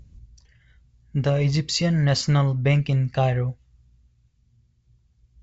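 The speech comes over a G.722 wideband telephone path at 64 kbit/s that is working as intended, with no technical faults to be heard anywhere in the recording.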